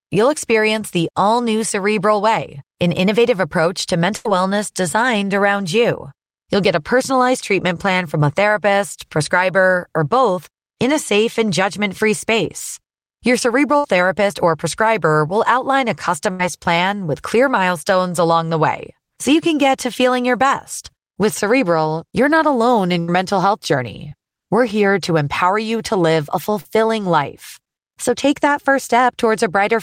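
Bursts of packet loss occur at 4.16–4.26 s, 13.77–13.85 s, 16.31–16.40 s and 23.00–23.09 s: about 70–90 ms is lost each time, bridged by a fading continuation of the preceding sound before playback jumps ahead. Short concealed packet loss follows at 24.09–24.12 s and 26.61–26.65 s, where 20–30 ms gaps are filled by extrapolation and heard as brief smears.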